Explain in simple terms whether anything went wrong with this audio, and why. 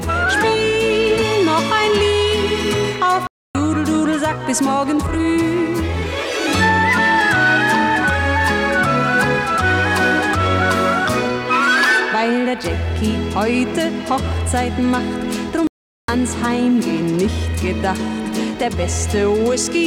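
Two playback stalls, at 3.27 to 3.55 s and 15.67 to 16.08 s: the sound just drops out mid-flow, likely because the player briefly ran dry of data.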